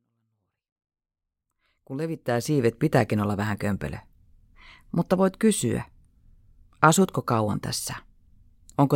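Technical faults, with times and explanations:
The speech signal carries no technical faults, and its level rises in a smooth fade-in from the very beginning to about 2.79 s with no click or hard edge.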